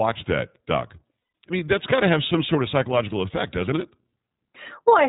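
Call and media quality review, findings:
iLBC codec, full clip: narrowband, nothing above 4 kHz, plainly audible rough, slightly synthetic texture on speech. Each frame's excitation is coded independently, with no carry-over between frames. Sound fits the 30 ms frame mode at around 13.3 kbps.

Lost iLBC frames, 1.19–1.34 s (150 ms): held, faintly buzzy vowel-like tone. The decoder's loss concealment repeats the last pitch cycle mixed with noise, which fits about five dropped 30 ms frames. Speech recovers almost immediately because the frames are self-contained.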